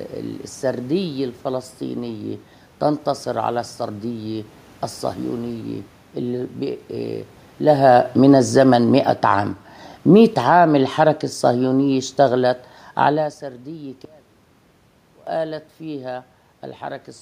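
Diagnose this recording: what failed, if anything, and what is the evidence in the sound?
The automatic gain control in the call processing failed. The level sinks in two gradual steps, from 7.58 to 9.31 s by about 4 dB, then from 9.97 to 13.36 s by about 6 dB. The room noise falls along with the speech, so this is gain being applied to the whole signal. The talker's movements near 7.5 and 13 s only shift the voice. The control judged the input too loud, or its background noise too strong for its gain, and kept lowering its gain.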